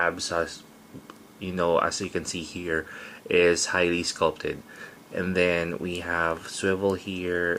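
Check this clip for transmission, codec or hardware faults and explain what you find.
No transmission, codec or hardware faults.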